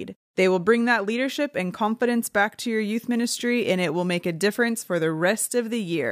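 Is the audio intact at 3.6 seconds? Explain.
Yes, the speech at 3.6 seconds plays through intact, with no audible fault at that moment.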